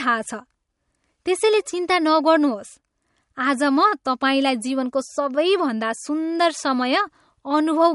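MP3 compression artefacts run through the whole speech recording. Nothing is present above 11.2 kHz, and the plainly audible damage is likely from an MP3 encoder starved of bits, which fits a low bitrate near 48 kbps, cutting the treble and discarding weaker frequency detail.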